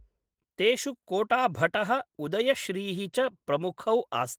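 Nothing in the recording stood out as a technical problem on listening.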